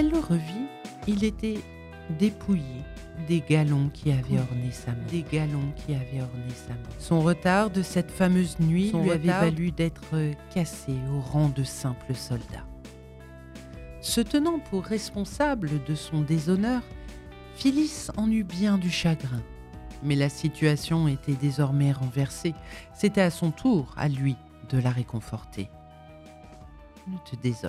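From 4.12 to 9.58 s there's a doubled audio track: a dry copy about 5 dB quieter trails about two seconds behind, likely picked up again by a slower path.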